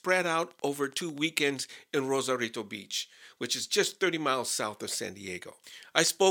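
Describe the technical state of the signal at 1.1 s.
At 1.1 s you're right near the end of a train of clicks running from about 0.09 to 1.19 s: evenly spaced ticks at 12 per second, around fifteen, peaking near the speech level. It's likely interference or a faulty connection injecting pulses.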